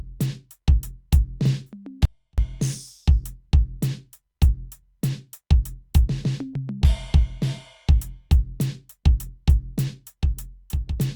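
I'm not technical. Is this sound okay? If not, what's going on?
No. At 2.05 s the music suddenly drops to a faint trace for about a third of a second, returning at 2.38 s: an audio dropout to a faint residue, likely a brief signal loss.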